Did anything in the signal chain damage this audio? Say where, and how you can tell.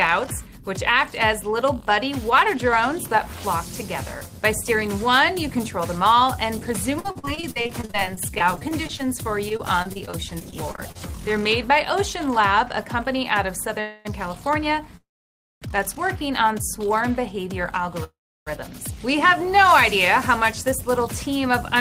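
Yes. Between 6.99 and 9.01 s, and again from 9.49 to 10.97 s, the sound turns choppy. This is repeated packet loss at the network stage: 24 and then 12 short holes, the longest 49 ms, each patched by stretching the previous sound.

At 13.81–14.07 s, 14.97–15.64 s and 18.04–18.49 s the audio stalls into a fading buzz or hiss. The second and third stalls drop to silence for 560 ms and 320 ms. These are call audio freezes, likely from delayed packets draining the jitter buffer. Playback resumes without lost material.

From 20.08 to 21.77 s the audio runs about 6% fast while the pitch stays the same. This is a jitter buffer speed-up: the receiver trims pitch-period slices, about a tenth of a second in total, to shed built-up delay.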